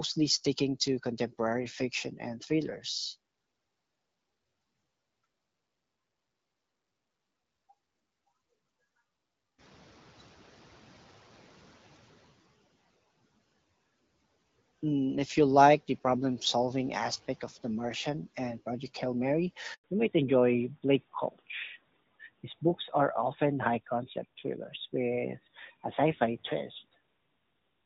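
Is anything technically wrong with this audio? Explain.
Yes, there are three faults in this speech clip.

From 9.58 to 12.35 s the noise suppressor is catching up. The room noise jumps by about 18 dB around 9.5 s, and the suppressor's noise estimate trails it. The new noise passes with less reduction at first, then sinks by about 9 dB over roughly 2.8 s as the estimate converges.

From 19.74 to 19.84 s there is a handover gap. The call is switched between networks and no speech frames arrive for 100 ms. The sound fades out quickly and stays silent until the new link takes over, so that stretch of speech is gone.

From 19.84 s to the end there is a fallback to narrowband. The call drops from HD Voice to a narrowband codec, which fits AMR-NB at 12.2 kbit/s. All content above 4 kHz disappears, leaving the voice duller and rougher than the earlier wideband section, where the light coding of what sounds like AMR-WB at 12.65 kbit/s kept it clear.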